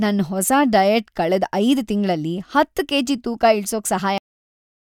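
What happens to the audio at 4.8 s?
By 4.8 s the speech has already stopped because of a cut-off end. The final stretch of audio buffers was never written out, so nothing was played after 4.18 s. Instead of finishing or fading naturally, the speech breaks off partway through a sound at that instant and drops straight to digital silence with no decay. That dead silence then continues through the end of the clip, which is where 4.8 s falls.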